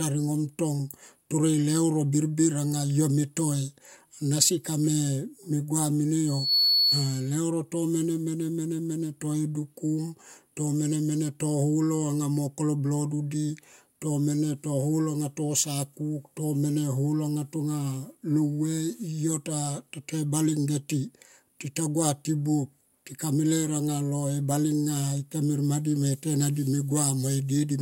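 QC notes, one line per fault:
6.27–7.41 s, loudspeaker feedback squeal: a piercing 4.4 kHz tone swells up over about a third of a second and sits around 5 dB above the speech before dropping away ahead of "to mene mene to". The microphone is picking up its own loudspeaker, and at that frequency the loop gain passes one, so the tone keeps reinforcing itself.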